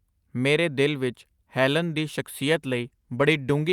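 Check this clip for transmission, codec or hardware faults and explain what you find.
One fault: a call bitrate drop from 2.36 s to the end of the clip. The call's bandwidth estimate fell, so the Opus encoder cut from 64 kbps to 22 kbps for the final 1.37 s and coded the speech more coarsely, leaving it rougher and less clear until the clip ends.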